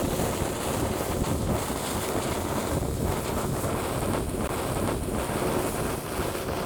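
At 4.47 s there is a CD skip. The laser lost its track and landed on another turn of the disc's spiral. The player mutes very briefly, giving a small tick. The sound then resumes abruptly from a different point.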